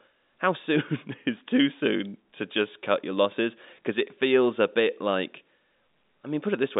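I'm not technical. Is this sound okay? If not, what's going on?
Yes, this one's fine: it sounds like an ordinary landline phone call, where the thin, muffled quality comes from telephone lines simply not carrying the higher sounds, not from anything going wrong.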